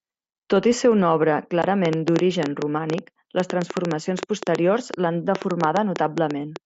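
At 1.62 s there is a short hole in the speech, about 15 ms long. This is unconcealed Bluetooth headset packet loss. Audio packets between headset and phone never arrived, and nothing was done to hide the gap. Silence or an idle pattern filled it instead. That length fits two lost frames on the mSBC link, whose wideband speech up to 8 kHz is audible around the gap. The edges are abrupt.

From 1.85 s to 6.57 s a train of clicks runs over the speech. They come at about seven per second, at an uneven pace, around thirty in all. Each click is sharp and similar in shape. The loudest stand roughly 15 dB above the speech. They continue through the pauses as ticking. The likely cause is interference from nearby equipment or a faulty connection or power supply injecting pulses.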